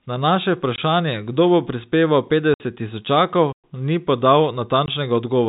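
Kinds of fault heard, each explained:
Packet loss filled with silence: Missing audio packets are replaced with digital silence instead of being concealed, so the speech is cut by abrupt holes with hard edges. Three gaps occur: 0.76 to 0.78 s and 4.86 to 4.88 s, each 20 ms, and 2.54 to 2.60 s, 60 ms long. The gap lengths are whole multiples of 20 ms, which fits 20 ms packets, with three lost in a row in the longest gap.
Digital wireless dropout: When a digital radio link loses too much data to recover, the receiver mutes the output with a very quick fade rather than playing corrupted audio. From 3.52 to 3.64 s the sound drops to near silence for about 115 ms, with no noise burst before or after. The edges are softer than the packet-loss gaps, and the telephone-band G.711 coding underneath continues normally on either side.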